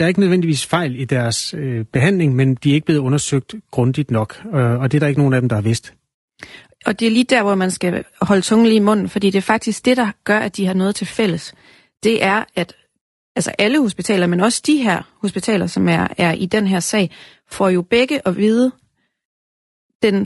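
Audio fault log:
throughout: low-delay AAC compression. The speech was likely coded with AAC-ELD, whose frames of about 10 ms resolve pitch harmonics poorly and spend bits fast. The voice sounds plainly rough and grainy, with noise between the harmonics, fitting a bitrate near 32 kbps.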